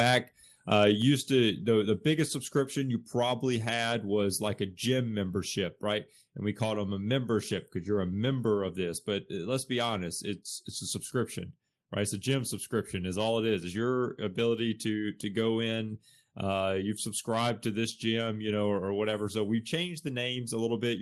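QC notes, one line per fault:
1.02 s, microphone volume stepped down: speech and background fall together by about 3 dB in one sudden step. The cause is likely the call software lowering the device's input volume after judging the microphone too loud.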